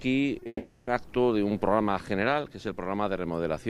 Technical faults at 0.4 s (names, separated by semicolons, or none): short concealed packet loss; long network dropout